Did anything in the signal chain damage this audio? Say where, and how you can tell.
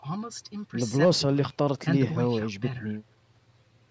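No, nothing in this speech stood out as damaged on listening, and the call microphone processing it passed through sounds as expected.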